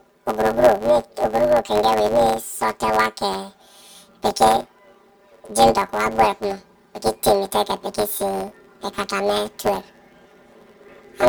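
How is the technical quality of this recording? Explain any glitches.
The quality is poor, with one fault present for the whole clip. Planar audio read as interleaved: 10 ms blocks of all-left then all-right samples are taken as alternating pairs, so each block plays twice at double speed. With blocks this short, the speech carries a robotic 100 Hz buzz rather than an octave shift.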